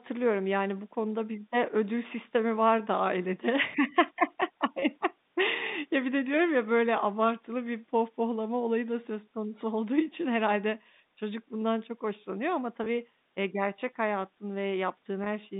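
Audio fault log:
4.80–4.82 s, 12.84–12.86 s and 15.24–15.26 s, packet loss with pitch repetition: each gap is 20 ms, which fits a single dropped packet. The receiver loops the last pitch period to fill it, so you get a brief, slightly buzzy held sound over the telephone-band audio.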